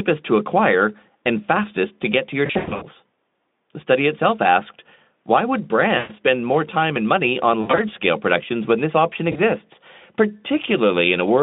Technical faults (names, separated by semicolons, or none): VoIP packet loss concealed by the speech codec